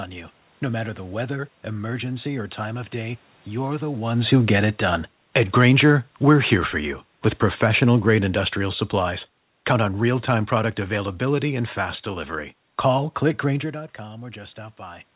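At 7.52 s, after "here for you with", automatic gain falling begins. The control lowers its gain gradually. The speech and its background sink together by about 6 dB by 11.71 s.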